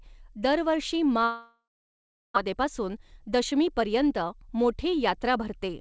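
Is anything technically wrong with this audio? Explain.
Yes, there are two faults in this speech clip, one after the other.

From 1.24 to 2.38 s the sound turns into a buzzy continuation of the last moment that fades out and gives way to about 0.7 s of silence before speech resumes. This is most likely a long network dropout: no packets arrived, so the receiver extended the last sound and then went quiet. Roughly 0.9 s of the original speech was never played, and the audio returns further along with that part missing.

From 2.48 s to 5.69 s the speech runs about 6% fast, sounding slightly hurried while the pitch stays the same. This is a jitter buffer speed-up. After the outage, the buffer held more audio than its target, about 0.2 s extra. To catch up, the receiver repeatedly cut out short pitch-period-sized pieces until the backlog was gone. This happened throughout the call path, whose band limit at 8 kHz fits a G.722 codec.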